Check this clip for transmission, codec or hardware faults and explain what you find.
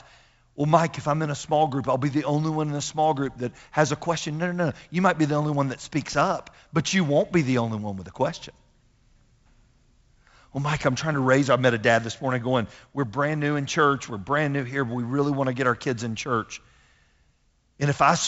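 No faults found: the speech shows only the light upper-band hiss and the ceiling near 7.7 kHz expected of G.722 wideband telephone coding, consistent with its 56 kbit/s mode.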